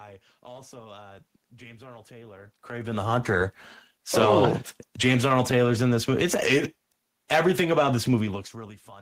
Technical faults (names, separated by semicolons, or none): none